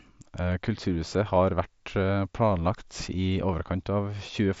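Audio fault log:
No faults in this speech clip; the audio carries the expected character of a Bluetooth mSBC headset link, wideband up to 8 kHz with light grain on the louder passages.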